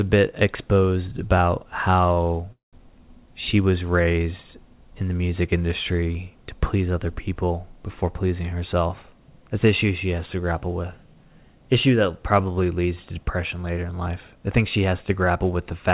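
A short stall from a late packet hits this speech recording at 2.14 to 2.18 s, just after "bit exposed about": a packet arrived late, the jitter buffer ran dry, and the receiver held the last sound for about 23 ms before resuming where it left off, so nothing is lost but the sound lingers unnaturally. A call audio freeze follows at 2.52 to 2.88 s, just before "she was raised in", likely caused by packets held up in transit: the receiver fills about 204 ms by continuing the last sound, which fades into roughly 160 ms of silence, then continues from the same point, adding a gap rather than dropping anything. A jitter buffer speed-up runs from 13.78 to 15.11 s, after "probably leads to depression": with too much audio queued, the receiver repeatedly cut out pitch-period-sized slices, about 150 ms in total, so the speech plays at 109% speed at unchanged pitch and sounds hurried. Throughout, the audio has nothing above 4 kHz, which fits a G.711 A-law call codec at 64 kbps.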